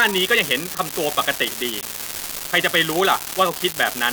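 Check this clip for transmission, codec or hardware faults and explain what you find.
There is one fault, an unreliable data bit, present for the whole clip. One line in the digital data path is marginal, so its bit comes out wrong in a random share of samples. Each wrong bit adds a spike of the same fixed size, here about -8 dBFS. The result is a steady crackle or fizz laid over the speech that carries on through the pauses, because the errors ignore the signal.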